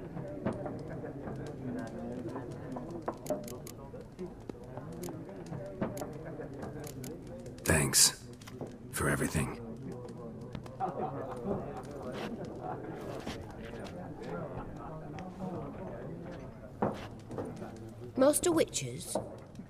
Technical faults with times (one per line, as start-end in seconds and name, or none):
4.50-4.52 loud pop
10.55-10.68 loud pop
18.43-18.45 loud pop